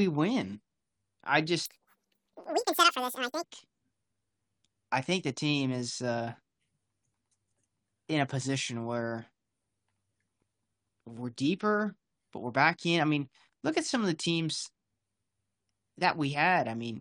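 From 1.66 to 3.43 s there is a wrong sample rate: the samples are clocked out about twice as fast as they were captured, which fits 22 kHz material played at 44.1 kHz. The speech runs at double speed, pitched a full octave (12 semitones) higher.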